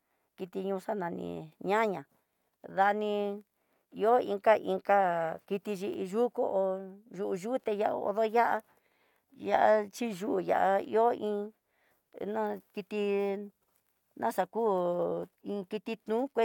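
A speech recording with no technical faults to point to. Nothing in it calls for a time or a cause.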